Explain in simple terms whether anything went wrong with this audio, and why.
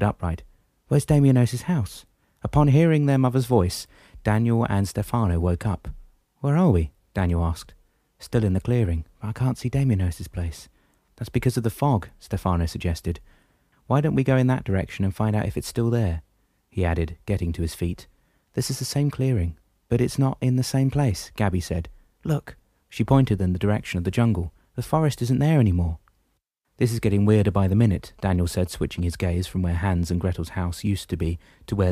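From 28.04 to 29.24 s, faint galloping ticks and buzzes appear. These are GSM signalling bursts: a nearby 2G phone's radio pulses were picked up by the audio circuit.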